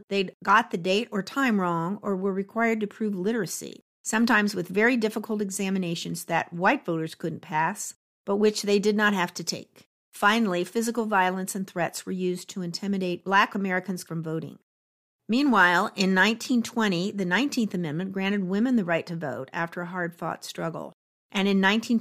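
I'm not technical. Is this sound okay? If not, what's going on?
Yes, it's fine; nothing here sounds wrong.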